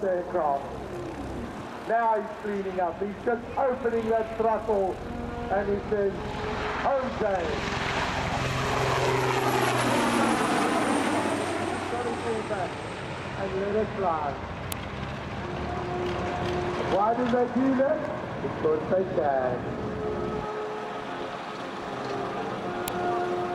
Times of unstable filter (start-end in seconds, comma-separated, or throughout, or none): none